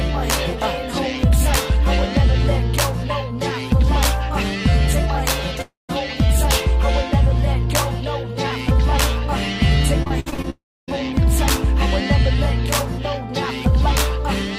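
At 5.61 to 5.91 s the sound breaks off and is carried forward as a fading buzz or hiss, then leaves about 0.16 s of silence before resuming with roughly 0.28 s lost. The likely cause is a long network dropout. From 10.03 to 10.48 s, repeated packet loss chops the sound into a choppy texture with pieces missing. Each hole is patched by extending the previous fragment, with the longest near 60 ms and about 40 percent of the span filled in. A second likely long network dropout follows at 10.50 to 10.90 s: a decaying fill, about 0.29 s of silence, and roughly 0.38 s missing.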